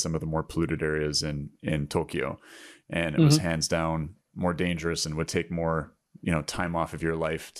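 No technical faults are audible anywhere in the recording.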